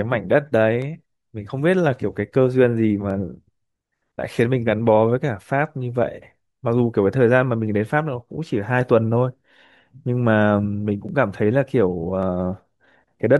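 From 0.82 s to 13.37 s the speech carries a regular click, about ten in all, recurring every 1.14 s. These are likely clock drift buffer slips: two devices running on separate clocks that disagree by roughly 300 ppm, so the buffer between them gradually over- or underfills until a small block, on the order of 15 samples, is dropped or repeated. Each slip breaks waveform continuity, producing a brief tick at that steady spacing.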